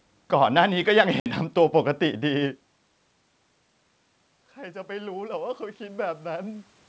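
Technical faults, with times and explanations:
1.20–1.31 s, packet loss on an ADPCM call: The speech drops into a hard-edged silent gap of about 60 ms, which fits the loss of a few consecutive packets, and on its return it is briefly slightly distorted. The decoder's adaptive predictor and step size lose track of the sender's during the gap, so the first tens of milliseconds after it are decoded from the wrong state until the two resynchronise.
4.54–6.72 s, automatic gain rising: The voice and the room noise behind it swell together slowly over about two seconds, rising by about 6 dB. The input level had fallen by about 17 dB, so the automatic gain control judged the signal too quiet and raised its gain gradually. Because the gain applies to everything the microphone picks up, the background comes up with the speech.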